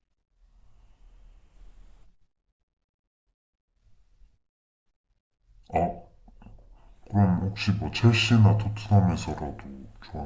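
Throughout the recording the playback side runs slower than the capture side, with no rate conversion between them, so the whole clip has a wrong sample rate. Speech plays at about 0.73 times its original speed and drops by about 5.5 semitones, which fits audio captured at 22 kHz being played at 16 kHz. Because speed and pitch fall together, the voice sounds deep, heavy and sluggish, as if dragged, from the first second to the last.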